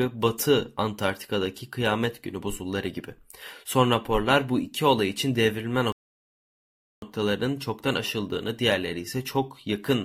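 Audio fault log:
5.92 to 7.02 s, rebuffering stall: right after "iki olay için devrilme" the speech drops to dead silence for about 1.1 s, then picks up cleanly with "çoktan aşıldığını diğerleri". The player ran dry and waited for data, so nothing's skipped, just time added.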